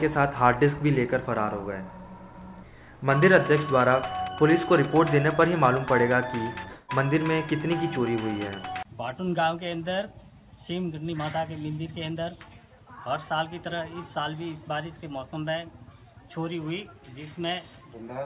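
From 6.68 to 6.91 s the audio gives way to a fading buzz, then resumes with roughly 0.2 s of material simply gone, the signature of a long network dropout, most likely a run of lost packets that the receiver papered over with concealment rather than silence. On a spectrogram the stretch shows smeared, repeating bands decaying in energy, and the waveform shows a shrinking periodic pattern before normal sound returns abruptly. Throughout, the G.711 A-law call codec leaves nothing above 4 kHz, visible as a hard ceiling across the spectrogram.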